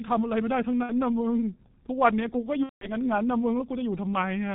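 Speech heard throughout through the G.723.1 codec: muffled, hoarse and cut off above 4 kHz, with smeared consonants, which points to a low-rate codec near 6 kbit/s rather than simple band-limiting. From 2.63 to 2.89 s, VoIP packet loss concealed by the speech codec stretches the voice into a fading buzzy tone or coloured noise. The missing stretch is about 180 ms, which fits roughly six lost 30 ms frames, and the voice stays weak briefly after the gap.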